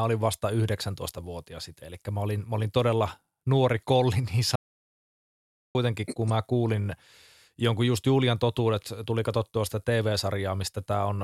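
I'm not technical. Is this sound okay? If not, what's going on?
No. There is an audio dropout to silence from 4.56 to 5.75 seconds. The speech stops dead for about 1.2 seconds, with no background sound at all. The input was likely lost briefly, such as a loose connection or accidental mute. That part can't be recovered.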